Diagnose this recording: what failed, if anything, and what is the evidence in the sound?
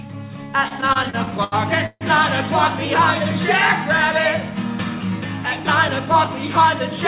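The network and jitter buffer stage failed first. Between 0.68 and 2.03 s the audio stalls again and again, in eleven separate gaps. Each time the buffer ran dry, because packets arrived late or too slowly. The receiver stretched the last sound to cover each wait. The longest fill lasts 148 ms and is faded. In all, about 367 ms is filled, 27% of that span. Nothing is lost, but the sound drags and stutters. This is a classic repeated stall, or stutter.

The second fault is a jitter buffer speed-up, also at the buffer stage. From 5.45 to 6.28 s the audio runs at 107% speed, with the pitch unchanged. The buffer held more audio than its target. To reduce the delay, the receiver cut many short pieces, each one or a few pitch periods long. Roughly 70 ms is removed. The passage sounds hurried. The call path itself carries G.711 mu-law, so nothing is present above 4 kHz.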